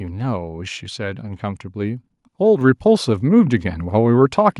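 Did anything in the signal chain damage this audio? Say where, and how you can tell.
Yes. At the call-processing stage, automatic input control raised the microphone's input volume in a single step, a microphone volume stepped up fault. At 2.61 s the speech and background noise jump together by about 4 dB and stay louder, with no fade between levels.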